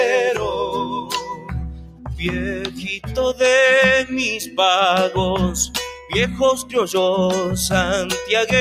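The level pumps and thins throughout, swinging by around 10 dB, because a speech-tuned noise suppressor was left on and treats steady, sustained sound as noise to turn down. Held sound sinks sharply from 0.84 to 2.22 s (about 16 dB), 2.64 to 3.17 s (about 13 dB) and 5.94 to 6.14 s (about 8 dB). This is sound cut by the noise suppressor, which pulled those stretches well below the rest.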